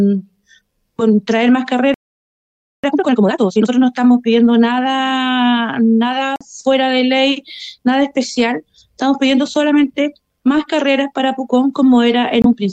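Playback halts at 1.94 s and stays silent for about 0.89 s until 2.84 s, the likely result of a playback stall in which the player ran out of buffered data or its thread was blocked. The sound stops mid-flow rather than fading, then resumes. From 2.84 to 3.72 s a time-compressed catch-up follows, with the player discarding its backlog by cutting out small segments and cross-fading the remainder. The audio runs at 2x speed with its pitch unchanged, so it sounds hurried. Twice the decoder rejected damaged compressed data and substituted silence, giving the corrupt frame muted fault. At 6.36 s an abrupt hole of 60 ms opens, about two frame lengths, and at 12.42 s a 42 ms hole, also two frames' worth, cuts in. Timing carries on unchanged after each. At 7.52 s a corrupt frame was decoded instead of rejected, so misread values put energy in the wrong frequency bands for about 23 ms, roughly a single frame, heard as a short squeak or noise blip.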